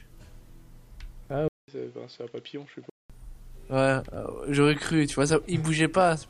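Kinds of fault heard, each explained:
Input switched to a poorer device: from 1.48 to 3.10 s the sound turns dull, losing everything above 7.6 kHz, after a 200 ms silence, with faint new noise; likely a mid-recording input switch.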